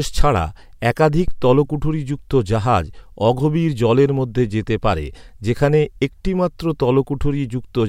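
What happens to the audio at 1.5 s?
There's a phantom power thump from 1.28 to 1.74 s: the supply switching on a live input pushes a step through the coupling capacitors, giving a deep thump peaking around -8 dBFS that dies away in about 100 ms.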